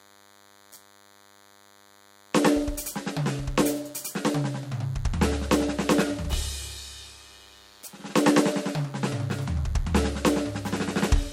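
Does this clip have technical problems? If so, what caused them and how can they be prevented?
Yes: a DECT cordless phone buzz runs under the music for the whole clip, a thin steady tone at 100 Hz, roughly 30 dB below the music. A nearby handset or base transmits a radio burst every 10 ms, which the audio circuitry rectifies into sound. On a spectrogram it shows as a ladder of evenly spaced horizontal lines at 100 Hz multiples. Keep DECT units well away from the audio gear and use shielded, balanced cabling.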